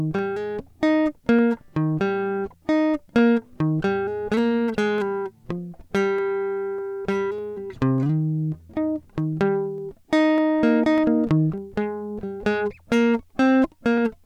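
Clock drift buffer slips, 0.19 to 13.98 s: a regular click every 0.6 s through the music, likely unsynchronised clocks dropping or repeating a few samples.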